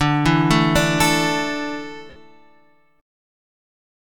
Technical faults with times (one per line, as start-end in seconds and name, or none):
2.10-2.16 lost LE Audio frames